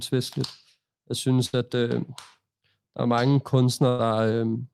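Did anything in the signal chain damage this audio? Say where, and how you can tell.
Yes. The network stage shows a burst of packet loss, twice: at 1.45 to 1.55 s, just before "at øh", and at 3.89 to 4.01 s, right after "der er mange". Each time the receiver stretched the last sound into a held buzz or fading hiss, about 75 ms and 98 ms long, then jumped ahead, dropping about 80 and 100 ms of speech. A spectrogram shows smeared, frozen harmonics decaying into a hard restart; the waveform shows a repeating, shrinking pattern before an abrupt change.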